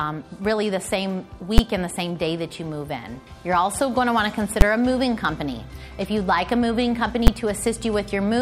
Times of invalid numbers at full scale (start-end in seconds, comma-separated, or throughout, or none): 1.58, 4.61, 7.27